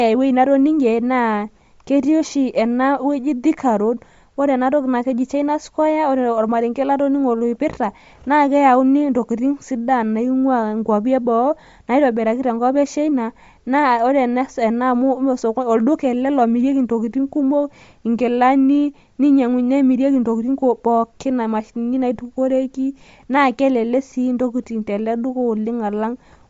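Throughout, the speech likely went through Bluetooth LC3 compression at a rate fitting 32 kbps, leaving a plainly grainy, breathy edge and nothing above 7.8 kHz.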